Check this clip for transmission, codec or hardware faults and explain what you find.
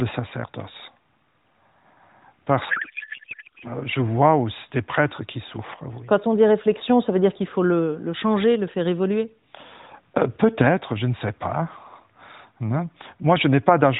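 One fault affects this AMR narrowband speech clip, whose 4 kHz bandwidth and faint buzz fit the 12.2 kbps mode. A codec payload misread runs from 2.70 to 3.73 s. The octet-aligned AMR frames appear to be unpacked as bandwidth-efficient, so every field shifts. For about a second the speech becomes garbled noise and warble that barely follows it.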